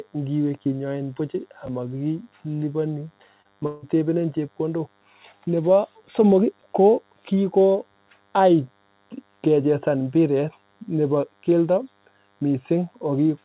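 A DECT cordless phone buzz runs under the whole speech clip. Something nearby sends a radio burst every 10 ms, and the audio circuit rectifies it. The result is a thin, steady 100 Hz buzz with many harmonics. It sits far below the voice, roughly 40 dB down.

At 1.66 s, right after "ngiwee kinyoin buch", the chunks play out of order. One chunk of about 11.6 ms arrives one chunk late. Nothing is lost, but the hard joins give a brief jumbled moment. The same fault returns at 6.61 s, with the same chunk length and the same one-chunk delay.

At 3.42 s there is short concealed packet loss. About 20 ms of audio never reached the decoder. The receiver continued the last sound for 24 ms, then blended back. It comes through as a tiny smear or wobble.

From 3.66 to 3.84 s comes a long network dropout, likely caused by about 160 ms of audio failing to arrive. The receiver carries the last sound forward as a fading buzz or hiss through the whole gap, with no pure silence. 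Speech resumes afterward, and the missing piece is simply gone. All of this passes through a telephone-band path that cuts off above 4 kHz.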